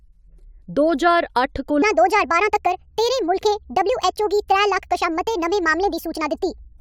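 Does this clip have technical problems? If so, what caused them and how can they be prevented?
Yes. A section at the wrong speed runs from 1.82 s, just after "दो ज्हार अट्ठ", to the end: the speech plays 1.46 times too fast, rising about seven semitones, likely from a clock mismatch. Matching sample rates across recording, editing and playback prevents it.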